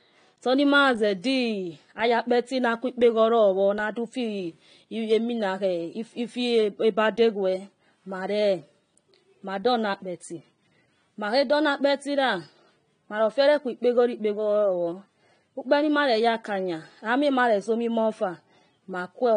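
AAC compression runs throughout the speech, from start to finish. Nothing sounds above about 9.7 kHz, and the audio is dull and smeared, with a fizzy, warbling edge on sibilants. The likely cause is AAC-LC coding at a bitrate that fits roughly 32 kbps.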